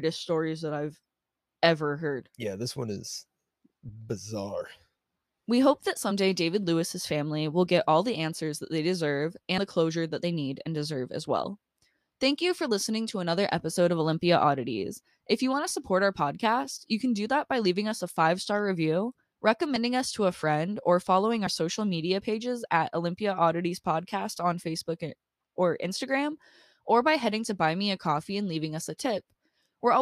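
Compressed frames skipped six times in this speech: at 4.60, 6.10 (right after "hope that"), 9.58, 11.44 (after "need and deserve as"), 19.76 (just before "us to a friend") and 21.46 s. Each time one or more whole frames are left out, so the audio jumps ahead by a sliver, somewhere between about 20 and 70 ms, and a bit of sound goes missing.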